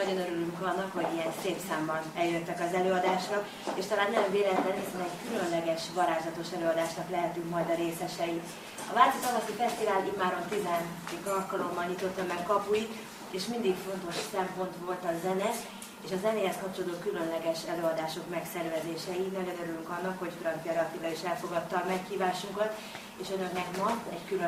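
No faults to report: nothing audible marks a problem anywhere in the recording.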